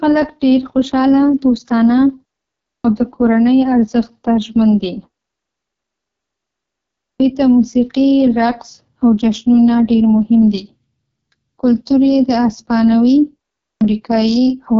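Speech coded with the AMR wideband (HD Voice) codec at 6.6 kbit/s, its lowest rate, so the whole clip sounds rough and raspy. The pulse-driven vocal tract model has too few bits to shape each sound cleanly. The audio still reaches about 7.3 kHz, with the top band filled by shaped noise. That sets it apart from a narrowband telephone codec: the harshness comes from starved coding, not from a missing upper band.

There is also a clipped start after a pause three times. At 2.76 s, after a 0.6 s pause, about 84 ms is swallowed before "د کورنۍ ارزښت ته". At 7.12 s, after a 2.12 s gap, about 77 ms goes before "ته موسیقي رقص او". At 13.73 s, after 0.45 s of silence, about 80 ms is lost. Each time the output device sleeps during the silence and wakes too late, so the first sounds are cut off.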